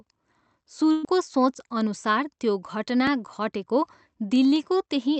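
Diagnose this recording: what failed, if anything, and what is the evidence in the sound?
Burst of packet loss, 0.91 to 1.06 s, network stage: the receiver extends and fades the last speech, then resumes about 120 ms later.

Dropped buffer (overrun) at 3.07 s: a small jump in the speech, likely the driver or buffer stage losing about 5 ms unread before it was overwritten.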